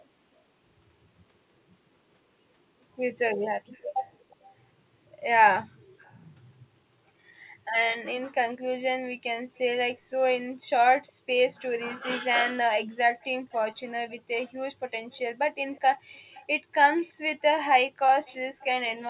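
From 3.73 to 4.49 s, 5.81 to 6.16 s and 13.2 to 18.65 s, a faint echo leak trails the speech by about 0.36 s, likely from a loudspeaker on the far end whose echo canceller let residue back into the call. The first two scraps sit roughly 30 dB down; the long final stretch is a little stronger. On a spectrogram, faint copies of each syllable's harmonics appear shifted right, all below the 4 kHz ceiling of the G.711 path.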